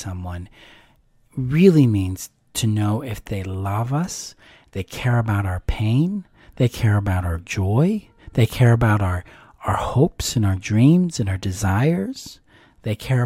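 No technical faults can be heard anywhere in this speech recording, and the signal stays intact throughout.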